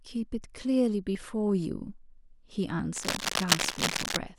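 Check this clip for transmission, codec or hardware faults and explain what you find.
Two kinds of fault are audible in this speech: two skips and, later, a long stretch of scratchy noise.

At 1.15 s and again at 2.80 s the speech jumps forward. A dropped buffer (overrun) is the likely cause. The recording software failed to read a block of samples before the hardware wrote over it, so roughly 20 ms of speech is simply missing and the audio on either side is spliced together. No silent gap marks the skip, which separates this from a dropout or muted buffer. What you hear is the sound lurching ahead with a tiny piece removed.

From 2.93 s to 4.17 s, uneven, crackling bursts of rustle sit over the speech at about the same loudness as the speech itself. This is cable scratch noise, probably from a worn lead, plug or control being moved so its contact resistance fluctuates rapidly. It differs from steady hiss or hum because it is irregular and clustered, coming and going over about a second. 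It also differs from the skips: it adds noise on top of the speech without removing any of it.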